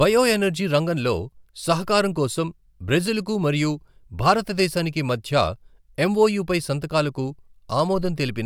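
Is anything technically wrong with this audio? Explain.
No, nothing is technically wrong with this audio.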